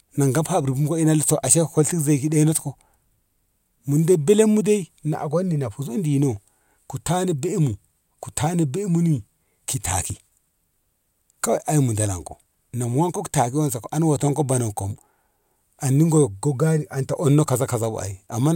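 At 10.10 s and again at 14.95 s, just after "waton ko bonan kom", the speech jumps ahead, losing roughly 50 ms each time with no gap. That's likely a dropped buffer (overrun), where samples got overwritten before being read.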